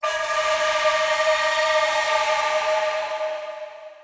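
Nothing here sounds off; the audio runs along without a single glitch or hiccup worth pointing to.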